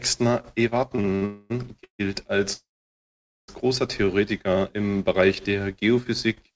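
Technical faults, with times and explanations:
0.96–1.23 s, repeated stalls (stutter): four short hold-ups, the longest 62 ms, where the receiver stretched the last sound to cover about 135 ms in total, roughly half of this span. Packets kept arriving late, so the jitter buffer repeatedly ran dry and the audio drags and stutters.
1.25–1.52 s, 1.84–2.01 s, 2.53–3.50 s, call audio freeze: the audio stops and the last sound is continued and fades, then resumes where it left off. The first freeze is filled for 245 ms without reaching silence. The second lasts 151 ms, with 110 ms of it silent. The third lasts 951 ms, with 840 ms silent. The likely cause is packets delayed in transit emptying the jitter buffer, so gaps are inserted but almost nothing is lost.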